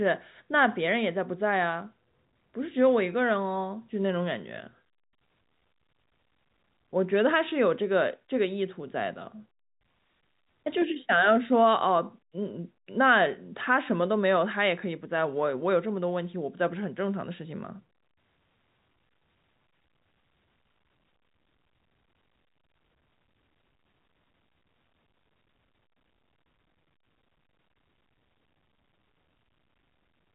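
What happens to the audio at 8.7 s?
Nothing goes wrong at 8.7 s; the speech carries on intact through that moment, with only the narrow band of telephone coding, which lets nothing through above about 3.8 kHz.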